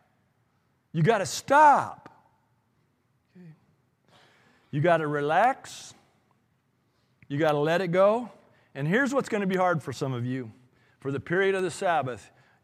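A background process stalling the USB bus or audio driver about once every 1.02 s causes periodic USB or driver dropouts in this speech clip, each losing a tiny fraction of a millisecond of signal to silence. Regular ticks result, from 0.32 s to 11.59 s.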